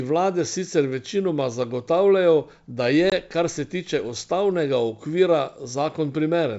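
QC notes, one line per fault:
3.10–3.13 s, packet loss on an ADPCM call: a hard-edged 20 ms hole of silence, about one packet. The decoder's predictor and step size drift from the sender's. Speech returns with slight distortion. It settles within tens of milliseconds.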